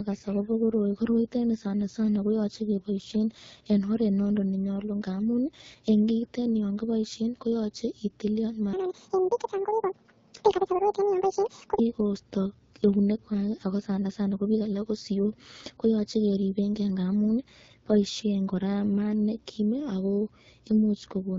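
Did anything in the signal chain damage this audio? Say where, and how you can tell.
Yes. At the codec stage, the whole clip carries the AMR wideband (HD Voice) codec, and the damage is plainly audible. The speech sounds rough and raspy throughout, with hiss-like top end above the coded band near 6.4 kHz. That texture points to one of the lowest AMR-WB modes, consistent with about 8.85 kbit/s, where the pulse-excited vocal tract model has too few bits to track the waveform cleanly.

The second fault is a section at the wrong speed, from 8.73 to 11.79 s. The speech in that span runs at 1.86 times normal speed, so it sounds hurried and pitched up by roughly ten semitones, then snaps back to normal rate and pitch. Because speed and pitch shift together, this is a resampling or clock mismatch rather than time-stretching. The likely cause is an editing or playback stage that read that segment against the wrong sample clock.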